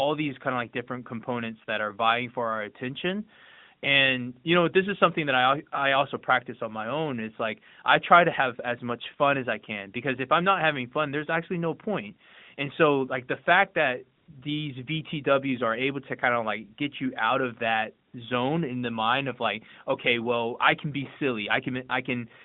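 At 14.18 s the speech briefly drops out for 100 ms, and again at 18.08 s for 60 ms: AMR comfort noise. The phone judged the signal silent and sent no speech frames, so the receiver substituted synthetic noise built from a rough level and spectral estimate. Each gap sounds like a smooth, even hiss switching in. On a spectrogram, detailed structure gives way to a flat, featureless band capped near 3.7 kHz by the narrowband line.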